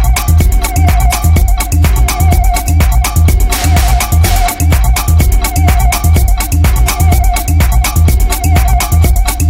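No technical faults detected.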